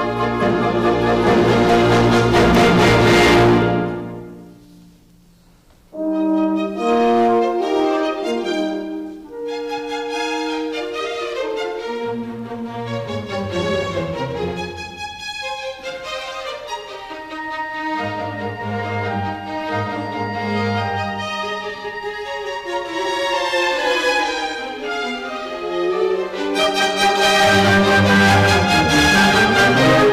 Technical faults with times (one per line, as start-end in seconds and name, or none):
0.00-30.12 hard clipping